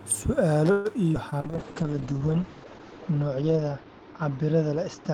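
At 0.71 s the speech stalls until 0.88 s. The last sound is stretched into a fading buzz or hiss for about 135 ms, then resumes where it stopped. Nothing is lost. This is a call audio freeze, likely from packets held up in transit.

At 1.13 s comes a skip ahead. Roughly 70 ms of speech is dropped, and playback jumps forward to 1.17 s. The two sides are joined almost directly. The result is a small clipped jolt rather than a gap.

At 1.30 s there is short concealed packet loss, lasting to 1.35 s. About 40 ms of audio never arrived. The receiver patched the hole by extending the previous sound, then blended back. It comes across as a brief smear or wobble.

From 1.38 s to 2.27 s, a jitter buffer slow-down stretches the speech. Single pitch periods and pause fragments are repeated, adding 102 ms. Speech runs at 90% speed with unchanged pitch. Sounds drag.

From 1.42 s to the end, a call bitrate drop takes hold. 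The encoder falls from 40 to 7 kbps and stays at its lowest for about 1.5 s. Bandwidth shrinks from 20 kHz to 8 kHz. The speech turns muffled and rough.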